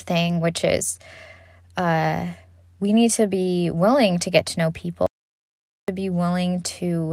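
From 5.06 to 5.88 s, an audio dropout to silence cuts the speech abruptly, likely from lost input; unlike a pause, room tone vanishes completely.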